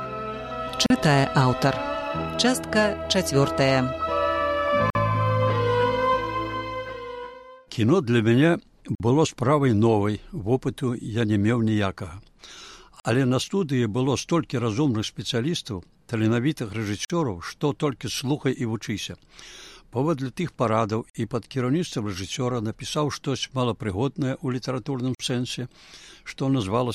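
The audio was assembled from separately encoded pieces, about 4 s long, and joined without trimming the encoder's start-up delay or final-frame padding, leaving a gap at each join of encoded pieces. The sound drops to silence with smeared edges, then resumes where it left off: about 39 ms at 0.86 s, and about 49 ms at 4.90, 8.95, 13.0, 17.05, 21.1 and 25.15 s.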